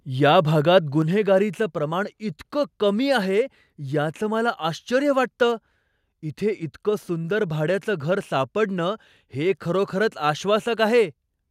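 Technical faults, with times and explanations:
1.02 s and 11.46 s, microphone volume stepped down: the sound and background suddenly drop, by about 4 dB then about 2 dB, likely the call software lowering the input level.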